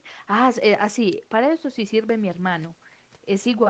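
No faults can be heard in this speech. It has the sound of an Opus call path, with its usual coding texture, and the top end stops at about 8 kHz.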